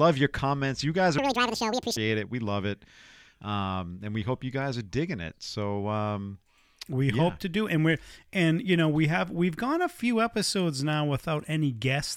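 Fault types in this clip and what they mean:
Audio read two samples at a time (double speed): from about 1.18 to 1.97 s the speech suddenly rushes forward at twice its normal rate and jumps a full octave, 12 semitones, higher, with a chipmunk-like edge. The reader is treating each pair of samples as a single frame, as if the data had two channels or wider samples, so the audio plays back twice as fast.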